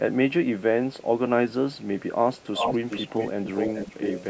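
Speech, heard through a channel delay (comb filtering) fault across the whole clip. One channel arrives a few samples late, just under a tenth of a millisecond, and the two are summed to mono. With so small an offset, the first cancellation notch falls high, around 7 kHz, just below the 8 kHz top of the call-processed band. The result is a dulled, slightly phasey upper treble rather than an obvious hollowness in the body of the speech. From 2.41 s to 4.24 s a second copy of the speech trails the original by 411 ms, sitting only a few decibels below it. This is an echo leak, likely from a far end playing the call on a loudspeaker whose echo canceller failed to suppress the pickup, so the returned signal was sent back into the call.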